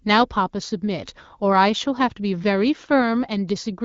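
Nothing technically wrong can be heard in this speech, which has been carried through the AMR wideband (HD Voice) codec at 12.65 kbit/s, a rate at which that codec keeps speech clear.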